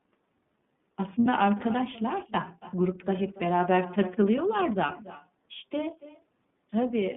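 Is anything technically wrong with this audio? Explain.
Yes. The recording has three technical faults: an uncancelled echo, narrowband iLBC coding, and one short packet-loss concealment event.

Echo with no canceller runs through the whole clip. The far end's loudspeaker feeds back into its microphone, and nothing removes that signal. Each phrase therefore returns roughly 300 ms later, at about 18 dB below the direct speech, as a fainter, thinner copy trailing behind it.

The iLBC codec is in use throughout, and its damage is plainly audible. Its frames are coded independently, and the spacing fits the 30 ms mode at around 13.33 kbps. The line passes only about 150 Hz to 3.6 kHz, so the speech sounds muffled, slightly rough and synthetic.

Lost iLBC frames occur from 1.20 to 1.26 s, a 60 ms gap that fits two missing 30 ms frames. The decoder fills the gap by repeating the last pitch cycle mixed with noise, which is heard as a briefly held, buzzy vowel. 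Because each frame stands alone, the voice recovers almost immediately afterward.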